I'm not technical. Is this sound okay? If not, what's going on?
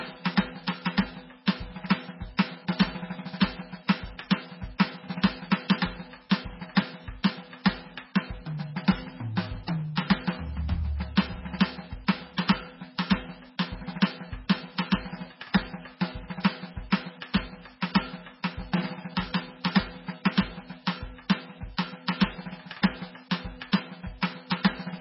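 No. Throughout the music, the top end is missing: nothing sits above about 5.6 kHz, so it sounds dull and muffled, with a watery, swirling quality and smeared attacks. The likely cause is heavy MP3 compression. The encoder had too little data to work with, so it cut off the treble and dropped quieter details, letting them flicker in and out from moment to moment, which produces that swirly texture.

At 2.37 s and again at 6.30 s, a brief hiss comes just before a sharp hit, and the hit itself sounds softened. This is pre-echo. The compression handles sound in short chunks and spreads its noise across each whole chunk. When a sudden loud attack lands late in one, that noise leaks into the quiet moment before it, here for about 15 milliseconds.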